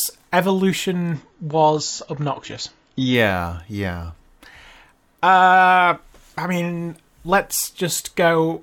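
A speech clip with one fault: an adaptive stream dropping to a lower bitrate. From 1.14 s to 3.14 s the quality falls abruptly with no gap. Nothing sounds above 7.5 kHz and codec artefacts rise. This fits a switch from about 96 to about 24 kbit/s AAC.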